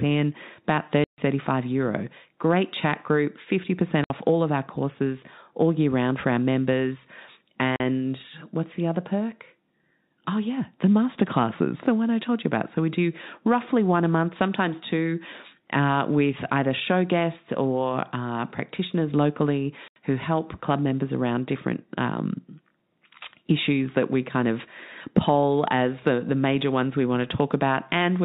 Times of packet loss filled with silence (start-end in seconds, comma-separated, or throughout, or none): 1.04-1.18, 4.04-4.10, 7.76-7.80, 19.88-19.96